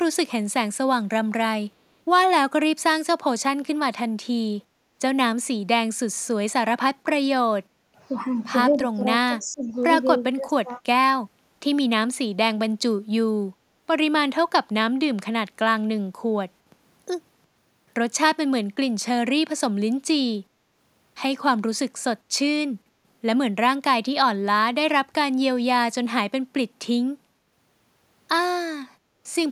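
From 7.47 to 10.8 s, the speech dips four times: 7.47–7.8, 8.89–9.05, 9.26–9.74 and 10.22–10.8 s. This is speech suppressed in double talk. Both ends likely spoke at once, and the echo canceller turned the talker down. The drops reach about 15 to 25 dB and sound like the voice briefly fading.

At 9.68–9.73 s, a very faint copy of the speech returns, delayed by 256 ms. This is echo leak. Loudspeaker sound likely slipped past the echo canceller and was sent back. It is a short, faint scrap.

At 28.91–29.22 s, the room sound drops by about 9 dB and then recovers. This is background gated by the echo canceller. It held the microphone down while the loudspeaker played, so the ambience briefly dips.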